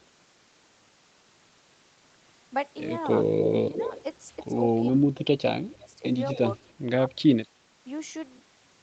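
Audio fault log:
3.67–3.82 s, 4.95–5.06 s, 5.65–6.01 s, 6.34–6.40 s, 6.56–7.38 s: speech suppressed in double talk. The voice dips by up to about 25 dB, likely an echo canceller ducking overlapping talk. These are level holes, not added sound.
3.74–4.03 s, 6.32–6.39 s: echo leak. A copy of the voice trails 265 ms behind, at about −10 dB and then a faint −30 dB. It is likely loudspeaker echo the canceller missed, and it is heard as an added delayed copy rather than a dropout.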